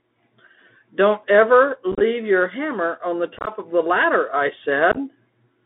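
The whole clip is speech squeezed through a Bluetooth CVSD headset codec, and the damage is plainly audible. Everything sits in a narrow band from roughly 250 Hz up to 3.6 kHz, which fits a 64 kbps CVSD link. That one-bit up/down coder can't keep up with fast, loud high-frequency movement, so sibilants come out scratchy, peaks distort, and there's a grainy hiss under the speech the whole way through.

On top of that there are three bursts of unconcealed Bluetooth headset packet loss, where chunks of the link just dropped out and nothing patched them over. The first runs from 1.92 to 2.02 s, right before "your hammer on the". About 56 ms goes missing across a 90 ms stretch, with the longest single hole around 26 ms. The second is at 3.37 to 3.51 s, between "your hammer on the" and "of the ladder I". Roughly 68 ms is lost across about 98 ms, and the longest gap is near 23 ms. The last sits at 4.92 to 4.97 s, just after "of the ladder I", with about 38 ms gone over 53 ms and the longest gap 15 ms. 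Each burst sounds like a quick crackly chop, with hard-edged holes and the speech returning quieter for a moment as the CVSD step size rebuilds.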